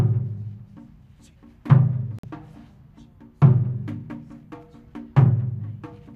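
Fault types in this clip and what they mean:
Digital broadcast dropout: The receiver stopped getting usable frames, through a lost signal or frames failing their checksum, and muted until clean frames arrived again. Here the sound drops out at 2.19 s and returns at 2.24 s. The gap is about 50 ms, which fits roughly two lost frames. Whatever was sent in that moment is gone, not delayed. The audio picks up later in the programme rather than where it stopped.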